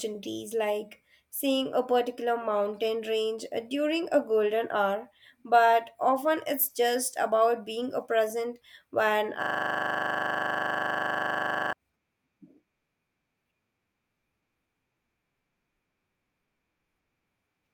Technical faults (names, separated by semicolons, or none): system hang loop